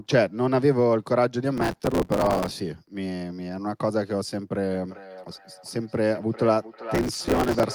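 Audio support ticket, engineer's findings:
Processor overload crackle, 1.57 to 2.51 s: gritty tearing burst over the speech. Audio processing is missing its deadlines on short buffers of about 5 ms, dozens in a row, and stale audio is replayed with hard edges each time.

Processor overload crackle again, 6.95 to 7.63 s: same gritty texture, same short-buffer pattern of repeated old audio. It clears once the CPU load drops and overlaps the echo below.

Feedback echo between two devices, 4.73 s to the end: the speech returns roughly every 0.4 s, thinner and ringing, peaking at about 13 dB below the direct speech. A second device in the room is replaying the call into this microphone, outside this device's echo canceller.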